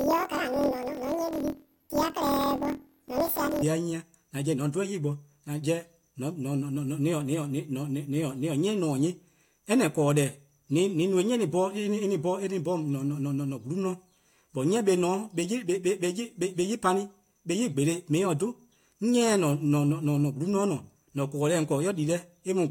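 From 0.00 to 3.64 s the speech has planar audio read as interleaved. Each 24 ms block stores all left samples and then all right ones, but the player takes them as alternating pairs, so every block is played twice at double speed, left then right. The result sounds an octave high with a flutter at about 41.7 Hz. Unlike a sample-rate mismatch, the overall pace of the speech stays correct despite the raised pitch.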